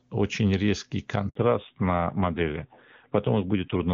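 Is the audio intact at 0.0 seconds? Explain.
Yes, the audio is intact at 0.0 seconds, with no fault at that moment.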